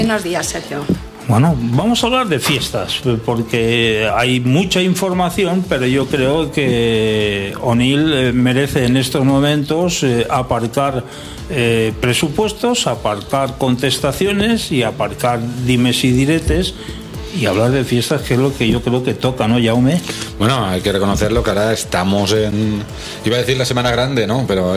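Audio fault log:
No technical faults can be heard anywhere in this audio, and the signal stays continuous and stable throughout.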